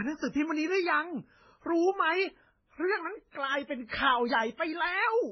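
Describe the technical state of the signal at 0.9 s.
At 0.9 s the speech has nothing above 6 kHz. It sounds dull and smeared, with two layers of swirly, warbling artefacts together. That runs through the whole clip. The likely cause is transcoding between lossy codecs, a low-rate MP3 stage, then AAC-LC. Each pass added its own damage.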